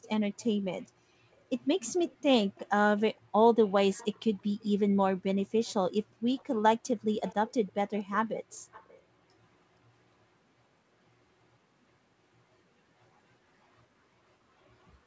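A faint delayed copy of the speech trails the talker from 0.03 to 1.42 s, 2.11 to 3.2 s, 3.93 to 4.65 s, 5.65 to 5.74 s and 6.36 to 8.99 s. Each copy lags by 470 ms. This is echo leak. It is likely caused by a loudspeaker on the far end whose echo canceller let some of the returned sound through. The echo sits roughly 25 to 35 dB below the speech. It is loudest near 4 s and from 6.4 s.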